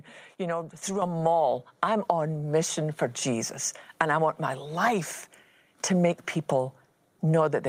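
At 1.02 s the microphone volume is stepped up. The call software judged the input too quiet and raised the device level in one jump, about 6 dB. The voice and the background get louder together, instantly, and stay at the new level.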